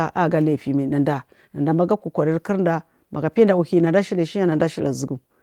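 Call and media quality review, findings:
Nothing stood out on listening to the speech.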